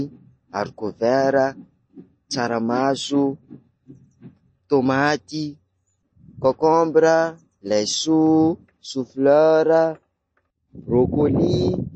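From start to end, the speech has nothing above about 8.4 kHz, so it sounds dull and boxed-in. Weak high detail flickers in and out, giving a watery, swirly texture. S sounds turn metallic. This points to MP3 compression, likely at a low bitrate around 32 kbps.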